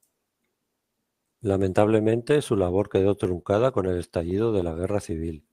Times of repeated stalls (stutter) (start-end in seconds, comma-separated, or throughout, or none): 2.93-3.47, 3.85-4.77